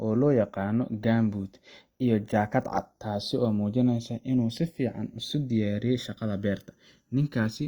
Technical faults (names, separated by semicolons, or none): channels drifting apart